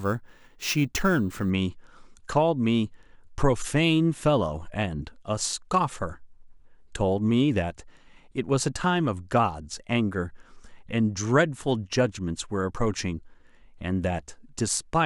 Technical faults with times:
0.00-1.50 imaging from sample-and-hold upsampling

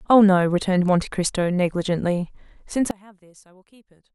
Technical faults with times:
2.91-4.14 one channel inverted

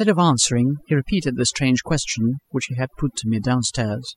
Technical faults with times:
0.00-4.16 overdone noise removal

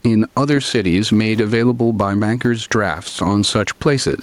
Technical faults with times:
0.00-4.23 gain pumping

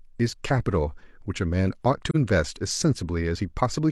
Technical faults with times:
2.10-2.16 AAC frame loss with muting

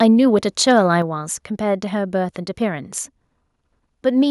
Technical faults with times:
0.02-0.05 microphone overload
0.68-0.79 microphone overload
1.02 microphone volume stepped down

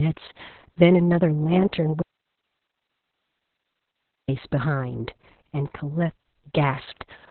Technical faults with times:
0.00-7.31 Opus voice compression
2.02-4.28 audio dropout to a faint residue

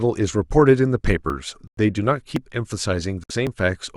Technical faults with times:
1.30 dropped buffer (overrun)
1.67-1.79 Bluetooth stall
2.36 dropped buffer (overrun)
3.24-3.31 Bluetooth stall
3.47 dropped buffer (overrun)

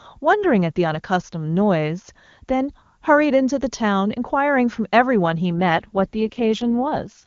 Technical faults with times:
5.59-7.24 AMR rate drop

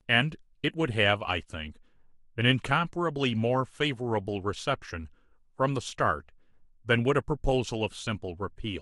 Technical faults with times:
1.76-1.78 compressed frames skipped

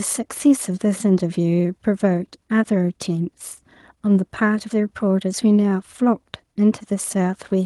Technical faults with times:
none

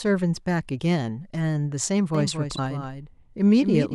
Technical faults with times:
2.15-3.94 doubled audio track
2.55-2.59 broken MP3 bit reservoir

